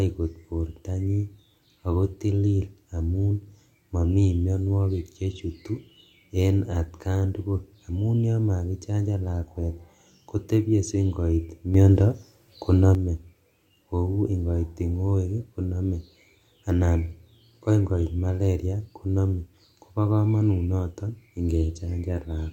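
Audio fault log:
11.74 to 12.95 s, sudden gain jump: the speech and its background noise step up together by about 6 dB with no fade, hold there for about 1.2 s, then drop back abruptly. The likely cause is a gain setting applied between neighbouring samples without a ramp.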